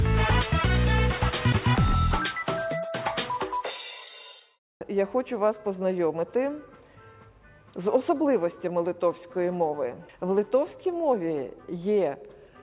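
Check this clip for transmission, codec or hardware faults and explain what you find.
No transmission, codec or hardware faults can be heard here.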